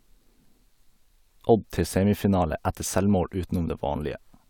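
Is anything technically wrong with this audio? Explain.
No, nothing is technically wrong with this audio.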